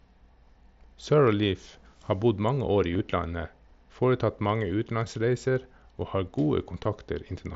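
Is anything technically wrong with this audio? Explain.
Yes. There is concealed Bluetooth headset packet loss, carried over an mSBC wideband headset link. It occurs from 2.92 to 2.99 s, just after "bodd mange år i", where about 30 ms of audio is missing in short gaps spread over 75 ms, the longest 15 ms. It occurs again at 6.84 s, where 15 ms is lost. Each time the receiver refills a gap by repeating the best-matching recent stretch of waveform, so the sound turns briefly buzzy with a slight warble as real audio resumes. On a waveform these spots appear as repeated identical cycles, and on a spectrogram as smeared, frozen harmonics.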